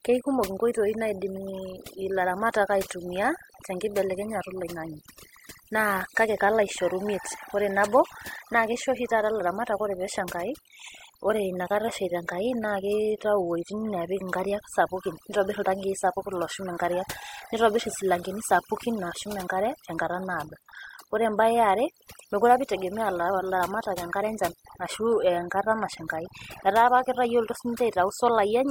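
From the very start and right through to the end, the speech carries the marks of overdone noise removal. A noise reducer was pushed too hard, so any frequency band sitting close to what it took for noise got clamped down or switched off entirely, and the softer parts of the voice were caught up too. You hear it as a near-silent background flecked with twinkling bits.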